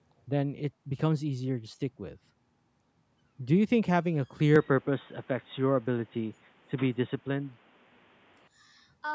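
At 4.56 s the speech suddenly goes dull and boxy, with a narrower band than the rest of the clip, which reaches up to 8 kHz. There's no gap at the change and the level stays about the same, but a new background noise comes in, sitting roughly 30 dB under the speech. That's most likely the input switched to a poorer device partway through. It lasts until 8.48 s, when the fuller sound returns.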